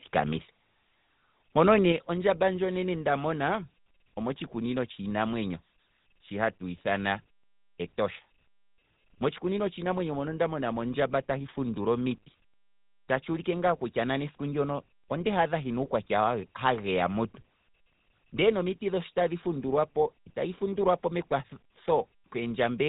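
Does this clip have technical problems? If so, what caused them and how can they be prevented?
Yes. The whole clip carries GSM full-rate codec damage. The voice sounds buzzy and gravelly, and nothing passes above 3.8 kHz. The codec models the vocal tract and drives it with coarse, regular pulses, which fits 13 kbps full-rate coding. Prevent it by using a wideband codec.

At 1.92 s the level drops suddenly by about 5 dB. Voice and background fall together. This is a microphone volume stepped down, likely by call software that judged the input too loud. Prevent it by disabling automatic microphone gain control.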